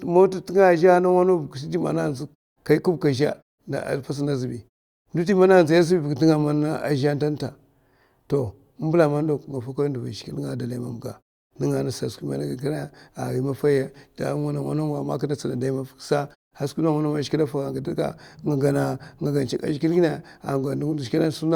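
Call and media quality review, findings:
Nothing to flag on this speech clip; no audible problems anywhere in it.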